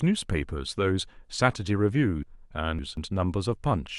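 A speech recording with chunks out of order between 2.23 and 2.97 s. Across those 0.74 s the sound turns briefly jumbled: a block of roughly 0.19 s is played after the material that should follow it, which fits that block arriving or being written about three blocks late. Nothing is missing, but the reordering leaves three hard joins inside the span.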